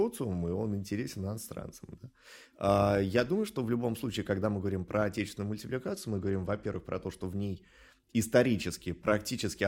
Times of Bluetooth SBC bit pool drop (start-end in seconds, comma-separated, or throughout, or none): 5.92-6.76